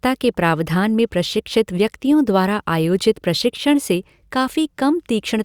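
No technical faults can be heard anywhere in the recording. The speech continues without any interruption or break in the signal.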